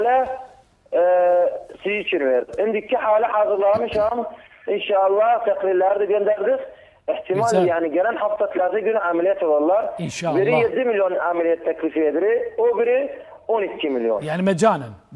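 Nothing technical stands out in this audio; there are no glitches, dropouts or level problems to point to anywhere in it.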